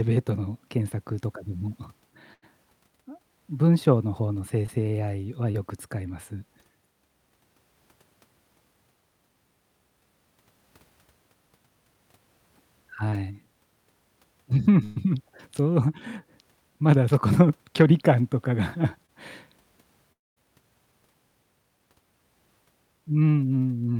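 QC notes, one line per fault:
2.33–2.44 s and 14.84–14.98 s, burst of packet loss: about 80 ms and then 120 ms of audio lost. The receiver extends the last sound as a decaying buzz or hiss, and playback resumes further on with that span missing.
4.66, 5.52, 13.10 and 19.06 s, short concealed packet loss: about 20 ms dropped each time. The gap is filled by continuing the preceding sound, heard as a brief smear or wobble.
20.12–20.38 s, long network dropout: about a quarter second of audio never arrives, mostly replaced by silence after a brief fade. This is likely caused by a network stall, and the sound returns further on without the lost section.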